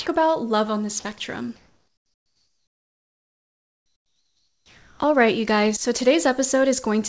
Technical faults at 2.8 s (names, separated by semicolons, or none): comfort noise in place of the background